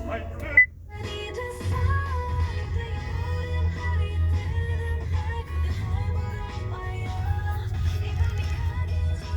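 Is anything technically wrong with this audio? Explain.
No, there's nothing technically wrong here that I can hear; the audio comes across just as it should, with no faults to point to.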